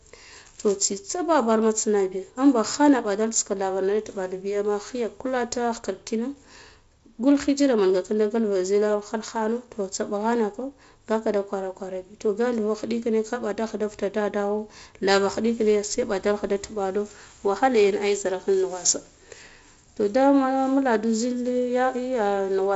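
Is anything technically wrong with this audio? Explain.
No, nothing's technically wrong here; it's speech carried over G.722 wideband telephone coding at 48 kbit/s, so the sound tops out at 7.6 kHz and has the light coding texture you'd expect from that path.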